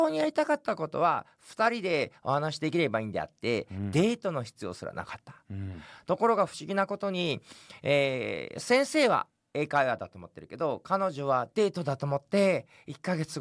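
No technical faults are audible.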